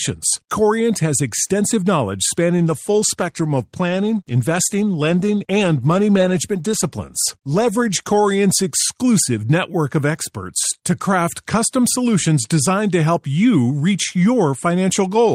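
From 2.59 s, just after "has extensive knowledge", the speech turns rough and watery, with the coarse, smeared texture that comes from squeezing it into too few bits. The quality stays at its poorest for about 5.5 s before clearing at 9.19 s, ahead of "network of experts to". This is a call bitrate drop. The call's bandwidth estimate fell and the encoder was pushed to a much lower rate, which fits a halving from around 32 to 16 kbps.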